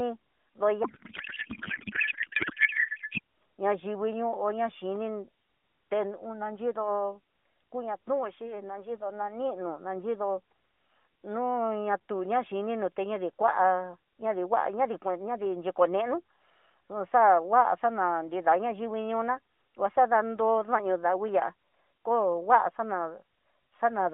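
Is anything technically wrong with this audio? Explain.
Yes. From 0.84 to 3.20 s there is a codec payload misread. The speech turns into garbled noise and warble that barely tracks it. The AMR bits are packed one way and unpacked another, which fits octet-aligned frames read as bandwidth-efficient, so the decoder reads its fields from the wrong places. The narrowband AMR coding around it is audible as a line band of roughly 200 Hz to 3.6 kHz.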